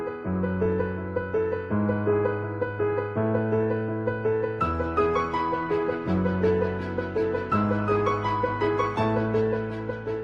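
No faults turn up anywhere in this recording.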